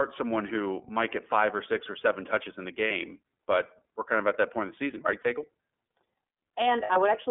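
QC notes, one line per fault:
Throughout, iLBC codec: The sound is confined to about 250 Hz to 3.5 kHz, so it is thin and lacks top end. Each frame's excitation is coded on its own. This leaves the speech plainly rough and synthetic. It fits iLBC at 13.33 kbps with 30 ms frames.
2.87–2.92 s, 5.22–5.26 s and 6.83–6.90 s, lost iLBC frames: Each gap is filled by a short, held, slightly buzzy vowel-like sound. The decoder repeats the last pitch cycle mixed with noise. The third gap is longer, fitting two lost frames rather than one. Because frames stand alone, the speech is clean again almost immediately after each.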